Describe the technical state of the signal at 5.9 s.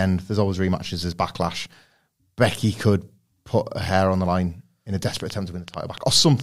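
At 5.9 s the speech sits inside a train of clicks running from 5.17 to 6.41 s: about seven similar pops at an irregular rate near 4.9 per second, peaking around 10 dB above the signal, likely from interference or a faulty connection. They appear as sharp waveform spikes and thin vertical broadband lines on a spectrogram.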